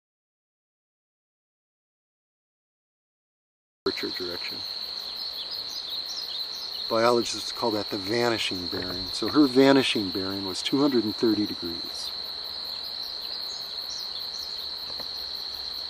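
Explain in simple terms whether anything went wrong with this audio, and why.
Audio dropout to silence from the very start until 3.86 s: the input was likely lost, so only silence was written, with no background sound, before the audio comes in.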